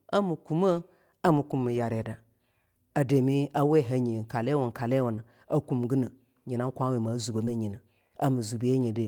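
At 5.15 s and again at 7.45 s, short concealed packet loss: about 20 ms of speech arrived too late, so the receiver extrapolated it, leaving a brief smeared wobble.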